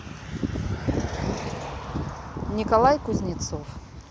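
No technical faults occur anywhere in the recording.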